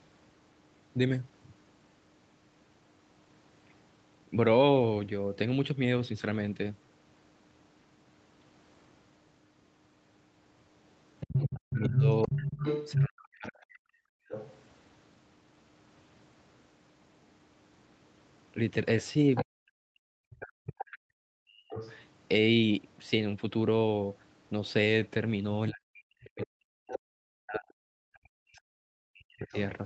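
From 11.2 to 14.54 s a second voice runs underneath the talker at about the same loudness. This is the other side's voice leaking through, most likely loudspeaker playback that the echo canceller failed to subtract from the microphone. Inside that stretch, from 11.55 to 13.89 s, the talker's own voice sinks by up to about 40 dB and breaks into pieces for roughly a second and a half in total. That is speech suppressed in double talk: with both sides talking at once, the canceller probably could not tell its talker from the echo and pulled both down.

At 14.17 to 14.28 s the room tone drops out by about 34 dB for a tenth of a second, then returns. This is background gated by the echo canceller, which clamped the microphone hard while the loudspeaker was still sounding and then released it.

From 19.35 to 22.02 s the leaked far-end voice returns, about 10 dB under the talker, likely the same uncancelled echo. 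Between 19.42 and 21.79 s the talker again dips by up to about 40 dB, in fragments totalling around two seconds, likely double-talk suppression once more.

From 25.7 to 29.55 s the talker is cut down in pieces for about three seconds, again up to about 40 dB, likely double-talk suppression. Leaked far-end voice sits under it at 26.39 to 26.97 s, about 10 dB down, and briefly at 29.44 to 29.62 s, about 25 dB down. Across the clip the audio is band-limited to 8 kHz, as the Opus call path sets it, with coding noise that fits a bitrate near 40 kbps.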